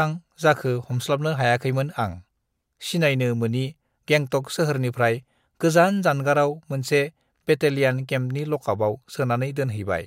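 Nothing in this speech recording stands out as a technical fault; there's nothing to flag from beginning to end.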